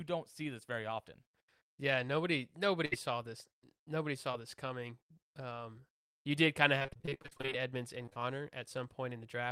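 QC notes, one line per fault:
2.85–2.94 s, burst of packet loss: roughly 60 ms of speech fails to arrive and is replaced by about 60 ms of extended sound. The receiver continues the last waveform while fading it, so a voiced segment becomes a brief held buzz and an unvoiced one a decaying hiss. Playback then picks up further along, with that stretch of speech gone.
4.32–4.35 s, short concealed packet loss: a single hole of about 20 ms, patched by continuing the preceding sound before crossfading back. It comes across as a brief smear or wobble.
8.05–8.18 s, short concealed packet loss: three back-to-back 20 ms losses, each bridged by about 20 ms of extrapolated audio. Together they form a short blurred patch where a consonant can drop out.
6.79–7.53 s, repeated packet loss (robotic sound): 19 separate gaps across this span, the longest about 29 ms, totalling roughly 380 ms of lost speech. 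About half the span is concealment output. Each gap is filled by extending the previous sound, and the next loss arrives before the audio recovers. The repeated patching gives a choppy, robotic texture with pieces missing.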